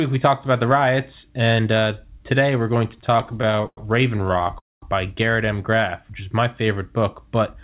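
Speech heard over a narrowband call path, with nothing above 4 kHz, which fits G.711 A-law at 64 kbps. Repeated stalls (stutter) begin right after "we're going" and run from 2.91 to 3.78 s. Sixteen or so brief hold-ups stretch the sound by about 250 ms in total, the longest lasting 100 ms, and nearly a third of that span is filler. Each time, the receiver's jitter buffer ran dry because packets arrived late, so the last sound was extended until data resumed. Nothing is lost, but the speech drags and stammers. A second, lighter stutter follows from 4.18 to 4.56 s. About eight tiny stalls, none longer than 11 ms, add roughly 75 ms, a fifth of the span. Immediately after, from 4.59 to 4.83 s, comes a call audio freeze. The last sound is held for about 230 ms, and most of that, about 210 ms, decays into silence before the audio picks up exactly where it stopped. A single longer packet delay that emptied the buffer is the likely cause. 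The result is an inserted gap rather than missing speech.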